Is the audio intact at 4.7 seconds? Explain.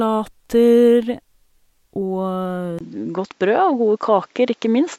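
No. From 2.79 s, input likely switched to a poorer, narrower-band device: a 20 ms waveform gap, then duller sound, spectrogram empty above 7.6 kHz.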